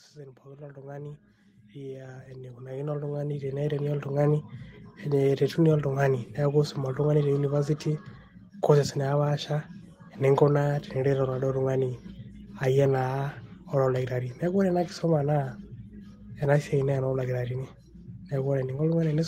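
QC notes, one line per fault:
0.13–4.33 s, automatic gain rising: the AGC decided the input was too quiet and kept pushing its gain up, about 19 dB over roughly four seconds, so the speech and the room noise behind it swell louder together instead of the level holding steady.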